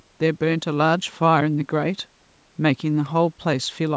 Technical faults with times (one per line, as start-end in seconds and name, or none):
none